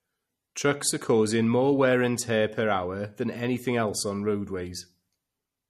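From start to finish the speech carries plainly audible coding damage, most likely MP3 compression at a low bitrate, which fits roughly 48 kbps. Nothing sounds above 14.5 kHz, and weak spectral detail flickers in and out between frames, so sibilants turn watery and swirly, with a metallic chirp and softened onsets. A simple low-pass filter would remove the same treble cleanly, without that shifting, bubbling texture.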